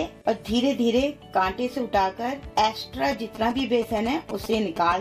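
A nearby 2G phone exchanging short signalling transmissions with its network gets its radio bursts rectified by the audio circuitry, producing GSM signalling bursts in this audio from 3.12 s to 4.93 s. The interference arrives as a galloping dit-dit-dit run of brief buzzes pitched at about 217 Hz, matching the burst repetition rate of the phone's transmitter, and sits roughly 10 dB below the wanted sound.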